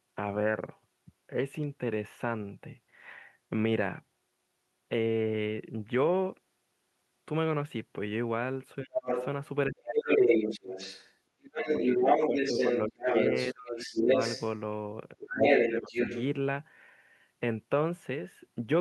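It's a speech clip, and from about 8.8 s onward it runs into echo-canceller trouble whenever both ends talk at once. The first problem is speech suppressed in double talk. The talker's voice gets pushed down hard at 8.83–9.11 s (the deepest drop is around 30 dB), then again at 9.69–10.11 s, across a long patchy stretch at 11.6–14.09 s where about a second and a half gets ducked, and at 15.15–15.94 s. In those later spots the drop is roughly 25 dB. It's likely the canceller couldn't separate the near talker from the loudspeaker echo, so it clamped down on everything. The second problem is the other side's voice leaking through. At 9.08–9.26 s a second voice comes in at about the same level as the talker. From 9.9 to 14.59 s it hangs around and ends up roughly 5 dB louder than the talker, and it returns at 15.4–16.24 s. The likely cause is that the canceller didn't fully remove the far end's loudspeaker playback from the mic signal, so the residual comes straight through.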